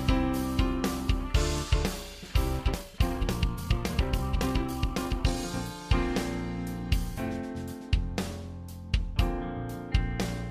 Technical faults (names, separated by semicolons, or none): time-stretched section